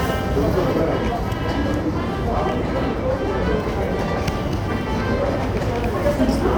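Nothing stood out on listening to this recording of sounds.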